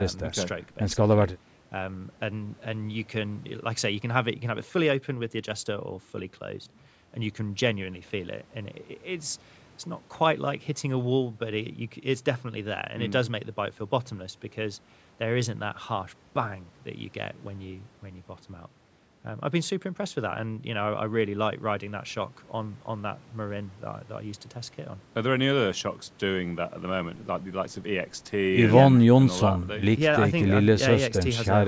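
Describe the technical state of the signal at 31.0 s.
At 31.0 s the speech signal is intact, with nothing above 8 kHz and the lowest bass trimmed by the call microphone processing, both normal for that path.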